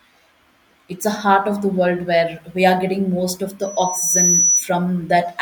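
After "are getting most of", from 3.62 to 4.68 s, a loudspeaker feedback squeal takes over as the microphone picks up its own loudspeaker and the loop runs away at 5.9 kHz. Unlike a fixed interfering whistle, it swells over about half a second, reaching roughly 5 dB above the speech.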